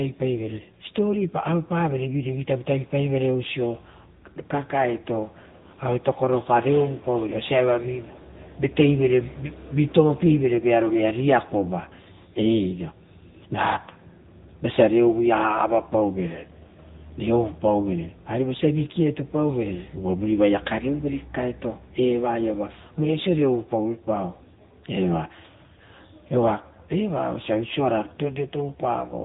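Thin, boxy and buzzy from start to finish, this speech clip carries plainly audible codec damage, with a synthetic edge on the voiced sounds and nothing at all above 3.8 kHz. That is the signature of the AMR narrowband mobile codec, AMR-NB, which rebuilds speech from a vocal-tract model excited by sparse pulses at an 8 kHz sampling rate. The degree of roughness fits one of its lower modes, around 8 kbps.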